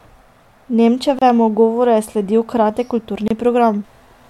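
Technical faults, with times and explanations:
1.19–1.22 s and 3.28–3.31 s, gap at a join of encoded pieces: the speech drops out for about 28 ms and 27 ms, then resumes where it stopped. Separately encoded segments were joined with their encoder start delay and final-frame padding left in, leaving abrupt silences with smeared edges.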